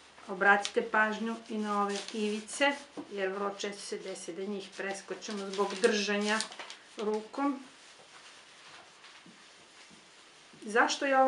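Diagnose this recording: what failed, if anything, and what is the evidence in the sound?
Nothing stood out on listening that would point to a failure at any stage of the chain.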